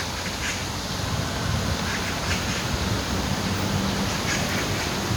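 No technical faults can be heard anywhere in this recording of sounds.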